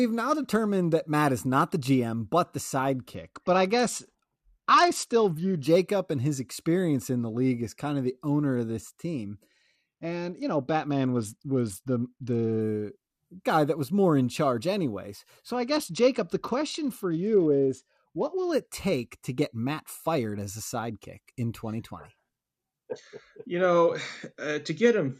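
The speech dulls and turns gritty at 3.15 to 5.64 s, after "but the", then at 9.49 to 12.61 s and 15.55 to 18.53 s. Each is a Bluetooth SBC bit pool drop. It fits a fall from 28 to 9, near 78 kbps, starving the treble bands.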